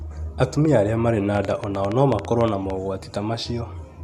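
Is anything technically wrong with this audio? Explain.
Yes, there's a train of clicks running from 1.35 to 2.71 s. You get around fifteen sharp ticks, close to nine a second but unevenly spaced, all with much the same shape, and the loudest stand out roughly 10 dB above the speech. The likely cause is some outside source, such as interference from nearby gear or a faulty connection or power supply, repeatedly injecting short pulses into the signal. It comes across as an irregular popping laid over the speech.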